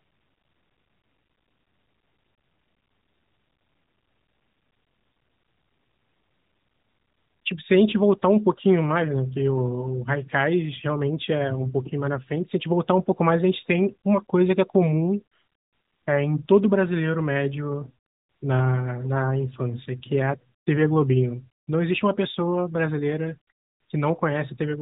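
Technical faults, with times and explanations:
No technical faults found; the speech is band-limited to below 4 kHz with only light coding texture, consistent with AMR-NB narrowband at around 12.2 kbps.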